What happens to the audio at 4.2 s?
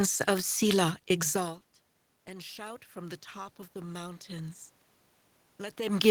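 At 4.2 s the automatic gain control is still rising. The ramp runs from 2.26 s to 4.58 s. The input level had fallen by about 19 dB, so the control judged it too quiet and slowly raised its gain, by about 5 dB in total. You hear the speech swell gradually over those two seconds. The room noise swells along with it, because the gain lifts everything together.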